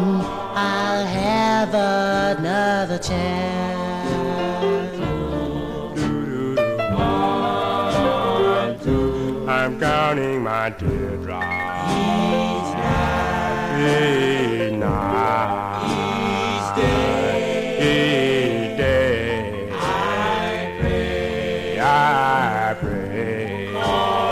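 Nothing here trips any alarms: the audio runs along without a single technical fault turning up anywhere in it.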